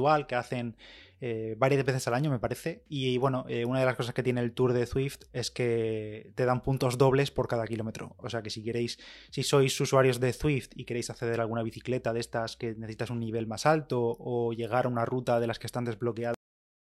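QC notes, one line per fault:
16.34–16.82 s, cut-off end: the speech stops abruptly at 16.34 s, mid-sound, and falls straight to digital silence for the remaining half-second with no natural decay. The final buffers were never written or played out, so the signal is truncated rather than faded.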